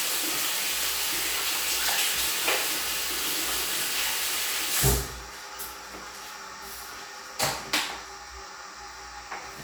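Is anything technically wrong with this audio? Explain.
No, nothing technically wrong can be heard here.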